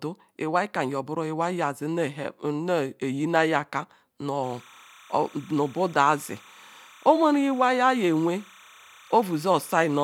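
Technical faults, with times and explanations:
4.43 s to end, timecode bleed: a steady chirping warble, roughly 1 and 2 kHz, sits about 25 dB under the speech, linear timecode at 30 frames per second leaking from an adjacent track.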